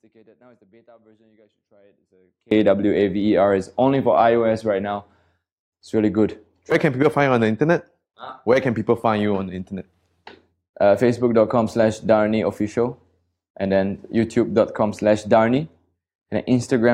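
Audio dropout to a faint residue opens the speech and runs to 2.51 s: only a faint leak far below normal remains, likely a lost feed upstream.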